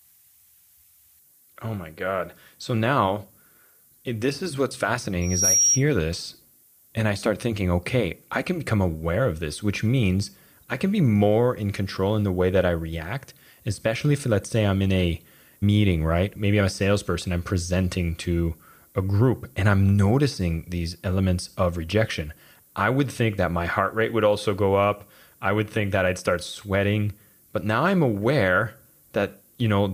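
From start to finish the speech carries low bit depth with noise shaping, around 9 bits, with the rounding error pushed upward so it's a thin, bright hiss about 30 dB down. At 5.21 s a loudspeaker feedback squeal kicks in: the mic hears its own speaker, a 5.7 kHz tone swells over about a third of a second to roughly 5 dB above the voice, and it's gone by 5.83 s.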